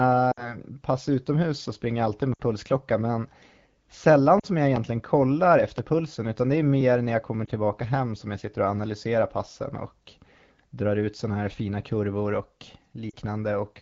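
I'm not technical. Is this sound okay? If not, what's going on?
No. At 0.31, 2.34 (just before "pulsklocka men"), 4.40, 7.45 and 13.10 s there are lost AMR speech frames, each 20 to 60 ms. The phone patches each gap by reusing the last bit of voice, a brief dip or warble at the single lost frame and a quick fade to near silence in the longer gaps, and the voice comes back weak or rough for a moment.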